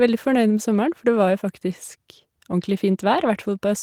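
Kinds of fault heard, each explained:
No faults detected in this speech recording.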